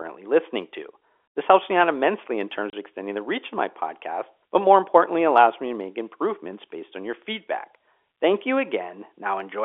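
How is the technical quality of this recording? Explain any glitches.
Two faults stand out in this speech recording: a brief dropout early on, and a high whistle that runs through the second half. The speech itself comes through a telephone-band path of roughly 300 Hz to 3.5 kHz.

At 2.70 s, the speech is cut by a hole about 30 ms long, with abrupt edges. This is packet loss filled with silence. A chunk of the stream never arrived, and the receiver played nothing in its place instead of smoothing over the gap. The hole's length fits a single lost 30 ms packet.

From 4.07 s to the end, a thin, high whistle sits underneath the speech, roughly 30 dB below it. It wavers between about 14.6 and 15.0 kHz. This is a switching supply whistle. A switch-mode power supply is oscillating in its audible range, and its pitch wanders as the load shifts. Telephone coding cannot carry anything near 15 kHz, so the whistle must have entered after that stage.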